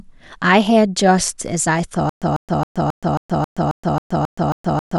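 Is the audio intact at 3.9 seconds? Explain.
No. Stutter with silent gaps runs from 2.09 s to the end of the speech clip, so 3.9 s falls inside it. The playback likely stalled and, at each retry, replayed its last fragment before running dry: a 146 ms burst of speech returns ten times at an even 270 ms pace, each followed by about 123 ms of digital silence. At 3.9 s you hear one of those repeated bursts or gaps, and the speech that belonged there is lost.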